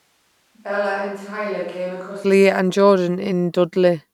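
From the start of the clip to about 2.24 s, the speech sounds roomy and hollow, thin in the bass, roughly 10 dB quieter, with a room-noise floor about 35 dB under the speech. This is likely a switch to a distant microphone. On the waveform, that first stretch has smaller peaks and then jumps abruptly to full level. The spectrogram shows weak low frequencies, smeared reverberant tails, and a faint wash of noise between phrases.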